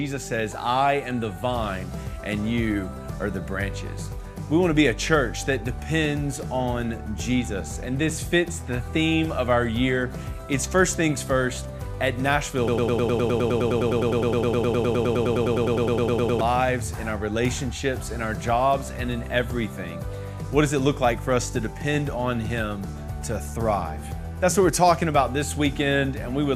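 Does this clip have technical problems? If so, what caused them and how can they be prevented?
Yes. The player or stream likely stalled and kept resending its last fragment, a broken-record loop: from 12.68 to 16.41 s a 103 ms piece repeats 36 times, replacing the audio due there. Adequate buffering and stall detection that mutes rather than repeats would prevent it.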